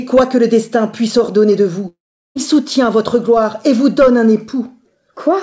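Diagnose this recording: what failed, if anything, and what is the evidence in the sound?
Network stage: a likely long network dropout. From 1.88 s a fading buzz turns to silence until 2.37 s. About 0.48 s never returns.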